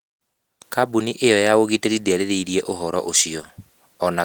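Nothing goes wrong anywhere in this speech; the Opus voice compression it passes through, a hybrid fullband stream at 20 kbps, stays in the background without introducing any fault worth pointing out.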